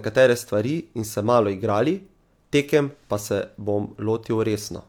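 No technical faults are audible.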